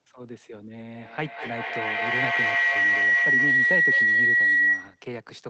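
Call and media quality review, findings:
Feedback howl, 0.93 to 5.13 s. Tone near 2 kHz builds to about 11 dB above speech. Loop repeat roughly 200 ms. Component: two endpoints sharing one room. Mic-to-speaker loop gains level each pass and narrows to one frequency.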